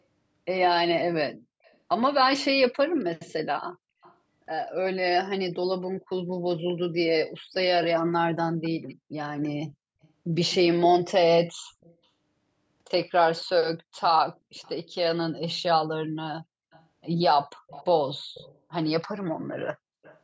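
In this speech recording, a faint, delayed copy of the speech trails behind it in three stretches. From 1.63 to 4.15 s it arrives 271 ms late, roughly 30 dB down. From 7.53 to 14.73 s it comes 255 ms late, about 25 dB down. From 16.71 to 20.19 s it is strongest, 294 ms late and around 20 dB down. This echo leak is likely the sound from a loudspeaker at one end being picked up by the microphone again and sent back because its echo canceller did not fully remove it.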